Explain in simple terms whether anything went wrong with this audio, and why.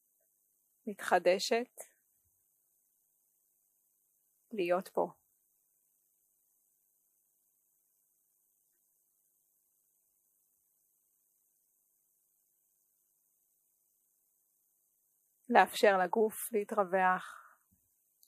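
Nothing went wrong here, since there's nothing in this recording that stands out as a problem or that a listener would notice as a fault.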